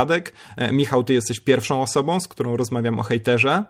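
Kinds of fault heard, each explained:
No faults can be heard anywhere in this speech.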